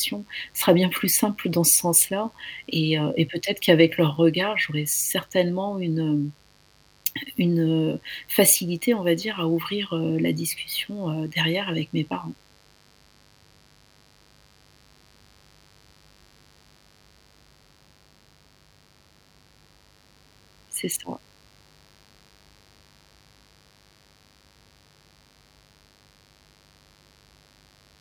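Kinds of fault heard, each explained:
Mains buzz: A steady, raspy buzz runs under the speech for the whole clip. Sharp switching spikes from a dimmer, rectifier or unshielded cable get in twice per 50 Hz mains cycle, so their energy spreads into a dense ladder of 50 Hz harmonics reaching several kilohertz. The buzz sits at roughly 35 dB below the speech. A spectrogram shows evenly spaced horizontal lines through gaps and words alike, and a zoomed waveform shows small repeating spikes every 10 ms.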